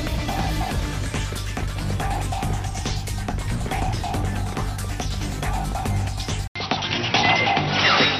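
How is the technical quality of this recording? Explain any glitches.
The recording has one clear fault near the end. At 6.48 s the sound cuts out for about 80 ms. When it returns, nothing is left above 5.8 kHz, so it turns dull and boxy. The level shifts by around 5 dB, and a faint new background noise appears well below the signal. This stays until the end. The likely cause is an input switched to a poorer device. Its narrower band, different gain and own noise floor replace the original path.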